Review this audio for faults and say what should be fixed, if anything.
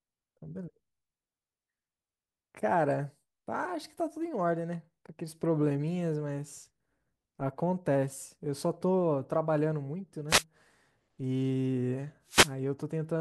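Two wireless microphone noise hits stand out in the speech, a short burst of static from 10.28 to 10.44 s and a longer swish from 12.26 to 12.54 s. Each one is the FM radio link fading as reflected signals cancel the direct one, so receiver noise climbs. To head this off, keep the receiver antennas in clear line of sight, use diversity reception, and check the venue for dead spots before recording.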